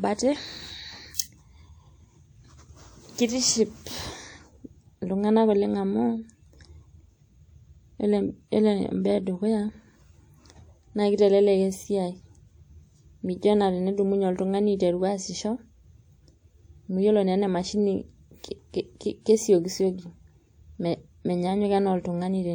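Pre-echo appears in this speech recording from 1.15 to 1.19 s, a short hiss of about 41 ms leading into a sharp onset. A transform codec spread its quantisation noise across the block, so noise meant for the loud attack leaks ahead and blurs it.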